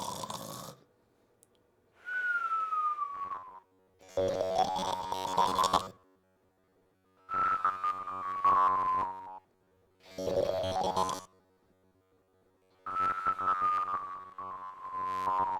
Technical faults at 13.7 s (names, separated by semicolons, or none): robotic sound from repeated short buffers